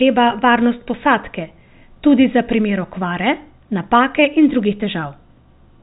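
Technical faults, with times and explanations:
Nothing stood out on listening; the speech has the narrow band expected of G.711 telephone coding.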